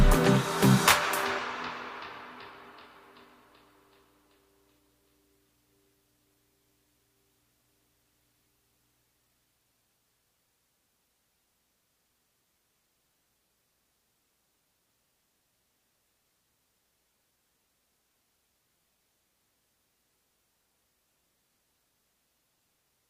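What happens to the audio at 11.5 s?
Nothing goes wrong at 11.5 s; the audio plays through that moment intact, with no dropout, click or distortion.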